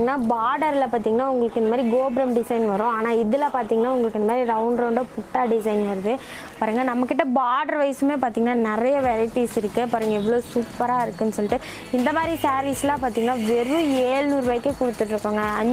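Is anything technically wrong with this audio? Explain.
No, there's nothing technically wrong here; no fault is audible anywhere in the clip.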